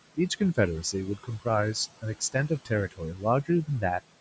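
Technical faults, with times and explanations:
Throughout: noise suppressor artifacts. The suppressor estimates the steady room noise, which sits about 18 dB below the speech, and pulls down every band it judges to be noise by about 17 dB, frame by frame. The background therefore drops away in the gaps and swells back under the speech.
1.17–1.46 s, 2.02–2.71 s and 2.91–3.24 s: speech cut by the noise suppressor. In each span the suppressor mistook low-level parts of the speech for noise and turned them down along with the background. The deepest drop is about 11 dB in the first span and about 15 dB in the second and third. Only brief pieces are hit, roughly a tenth of a second in the first and a little more in each later span, so the affected speech comes across swallowed or faint.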